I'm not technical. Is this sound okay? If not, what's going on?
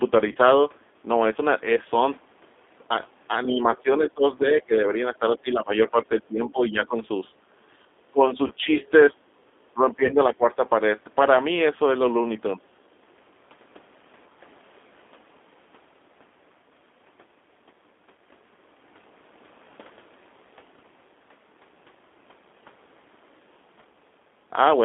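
No. Four problems can be heard in this speech recording.

The whole clip goes through the G.729 codec, a compression method used on internet phone calls that rebuilds the voice from a simplified model rather than sending the actual sound. Everything sits in a narrow band, roughly 250 Hz to 3.6 kHz, so the voice lacks both deep bass and crisp high end. The model-based rebuilding is plainly audible here, giving the voice a slightly rough, artificial, telephone-like quality from start to finish.

There are three short dropouts from VoIP packet loss concealed by the speech codec, at about 0.32 s, 8.47 to 8.53 s, and 10.06 to 10.15 s. Each time, roughly 30 milliseconds of the call went missing in transit. The receiving end filled the gap by continuing the last bit of voice it had, which comes out as a brief buzzy or smeared blip, with the voice sounding a little off just afterwards while the decoder recovers.

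The voice repeatedly sinks or partly cuts out, most likely speech suppressed in double talk. The longest stretch runs from 3.54 to 6.97 s, with about two seconds of that noticeably dimmed. Shorter dips follow at 8.11 to 8.78 s, 9.13 to 9.28 s, and 9.74 to 10.62 s. The level drops sharply, and in the 9.13 s dip most of all. When both people on a call talk at once, the echo-removal system can turn the speaker down along with the echo it is trying to remove.

Between 8.81 and 8.90 s a faint second voice slips in underneath, likely the other side's voice leaking through. The speaker's device plays the other person aloud, the microphone picks that up, and the echo-removal system fails to strip all of it out. What gets through is very quiet and very brief, a scrap of sound well below the main voice rather than anything you could follow.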